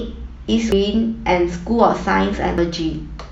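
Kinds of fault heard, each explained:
compressed frames skipped: Whole coded frames go unplayed, so the speech jumps ahead twice, by about half a second, then a little less.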